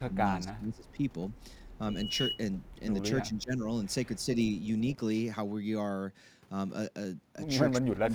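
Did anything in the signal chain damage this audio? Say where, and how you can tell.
Yes. At the converter stage, sample clock jitter runs throughout: a fine roughness or hiss, roughly 35 dB below the speech, that swells on loud, bright sounds and disappears in pauses. Timing error of a couple of microseconds scales with waveform slope. A spectrogram shows signal-following high-frequency haze.

In call processing, speech suppressed in double talk dips the speech from 0.0 to 1.02 s, 3.27 to 3.67 s and 7.87 to 8.15 s. The deepest drop is about 30 dB. The waveform envelope shows sudden notches, and the high end thins on the spectrogram. This is likely an echo canceller ducking both talkers at once.

Echo leak adds faint delayed copies at 0.85 to 0.91 s, 1.67 to 1.78 s and 4.43 to 4.67 s. They sit 336 ms behind the original, at about 40 dB down, or about 30 dB in the last case. On a spectrogram, they appear as pale, time-shifted replicas of earlier harmonic patterns, likely residue from a far-end loudspeaker that its canceller missed.

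Loudspeaker feedback squeal, from an acoustic loop at capture, appears from 1.89 to 2.42 s as a 2.9 kHz tone. It builds over about 0.3 s to about 5 dB above the speech. The spectrogram shows a single bright horizontal line that thickens, with a swelling sinusoid in the waveform.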